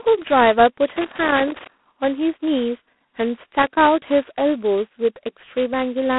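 A speech clip carried over a narrow telephone band, about 250 Hz to 3.4 kHz, with nothing above 3.9 kHz. A harsh, rasping hiss rides on the speech throughout and rises and falls with its level. That is heavy G.726 ADPCM coding damage. The sound points to the 16 kbit/s mode, where too few bits per sample leave coarse prediction errors. Loose connector crackle breaks in from 0.90 to 1.67 s and again from 3.62 to 3.88 s. These are irregular scratchy bursts. A worn or dirty contact is making and breaking, chopping the signal.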